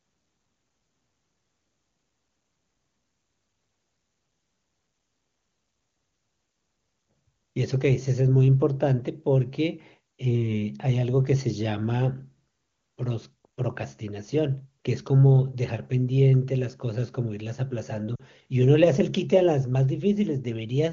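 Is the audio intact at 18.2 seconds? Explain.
No. From 18.15 to 18.23 s, about 40 ms, there are lost AMR speech frames, which fits two 20 ms frames failing their checks. The AMR-WB decoder fills the gap by repeating the last good pitch and vocal tract settings at falling gain, so the speech fades to near silence within the two frames rather than cutting off, then comes back weak or rough for a moment. That sets it apart from a hard dropout, which would give abrupt silence or a click, not this softened, gradual fade.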